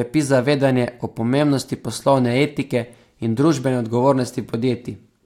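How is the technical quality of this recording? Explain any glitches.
No technical glitches are audible.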